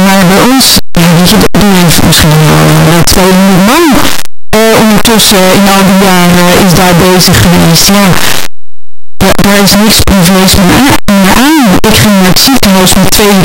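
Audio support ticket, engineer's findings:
Harsh, loud distortion across the whole speech clip, with soft sounds as loud as strong ones. Likely signed and unsigned mixed up on the 8-bit read, flipping the top bit.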